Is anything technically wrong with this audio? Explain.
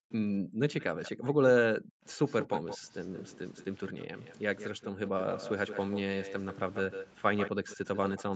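Yes. The speech carries two kinds of fault.

Background gated by the echo canceller, 0.0 to 0.6 s and 1.8 to 2.03 s: while the far end's loudspeaker played, the canceller pulled the microphone down by about 40 dB. The room sound dips out for a few hundred milliseconds in each span, then returns when it releases.

Echo leak, 0.8 to 1.12 s and from 2.26 s to the end: the likely cause is a far-end echo canceller that failed to remove its loudspeaker's pickup, sending it back. A copy of the speech trails 174 ms behind, about 15 dB down at first, then about 10 dB down for the rest.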